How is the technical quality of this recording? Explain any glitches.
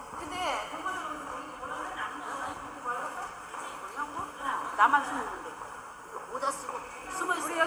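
Nothing stood out on listening to this recording of sounds; there were no glitches to explain.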